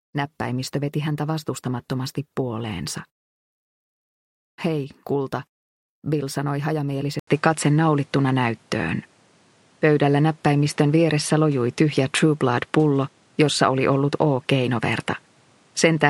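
At 7.19 s the input likely switched to a poorer device: an 80 ms gap, duller sound cut above 11.4 kHz, shifted level, faint new noise.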